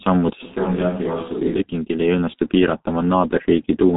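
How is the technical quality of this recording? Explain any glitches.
The recording is heavily degraded by low-bitrate telephony coding throughout, with a brief stretch where the sound turns distant.

G.723.1 codec, whole clip: speech is muffled and hoarse, with smeared consonants and nothing above 3.8 kHz. The coder's slow 30 ms frames and very low bitrate (around 6 kbit/s) discard detail.

Switch to a distant microphone, 0.43 to 1.59 s: the voice abruptly turns hollow, thinner and roughly 5 dB quieter, with faint room noise. The likely cause is a microphone farther away replacing the close one.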